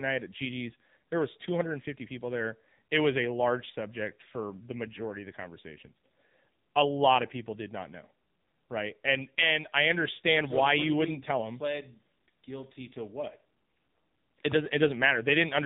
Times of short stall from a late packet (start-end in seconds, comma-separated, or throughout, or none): none